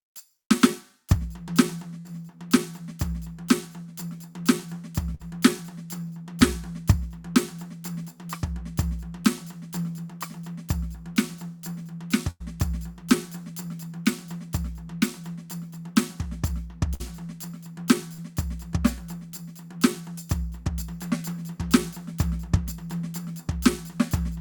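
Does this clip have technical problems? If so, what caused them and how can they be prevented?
Yes. The music breaks up four times, at 1.99 s, 5.15 s, 12.30 s and 16.94 s. Each time the last sound is drawn out and fades before playback jumps ahead, leaving a small piece of the music missing. This is a burst of packet loss: a run of packets arrived too late or not at all, so the receiver stretched and faded the last sound for about 50 to 100 ms. The longest gap is at 12.30 s, where roughly 100 ms of music is lost. A larger jitter buffer, forward error correction or a less congested network link would keep these packets from going missing.

At 18.14 s there is a briefer smear, a quick wobble lasting about 40 ms that blends back into the music. This is short concealed packet loss. The receiver briefly carried the previous sound forward to cover a packet that did not arrive in time, then faded back into the real audio. 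Redundant packet coding and a steadier connection with less jitter would prevent these short dropouts.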